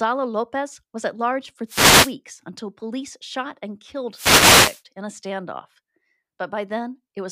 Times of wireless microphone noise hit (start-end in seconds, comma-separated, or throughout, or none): 1.67-2.14, 4.12-4.82